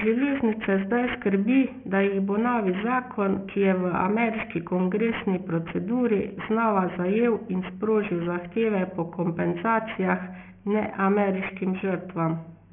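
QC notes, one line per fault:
Throughout, aliasing: the sample rate was cut without an anti-alias filter, which fits a drop to 6 kHz, so content above the 3 kHz fold point mirrors back down as false tones roughly 15 dB below the speech, making sibilants gritty and metallic.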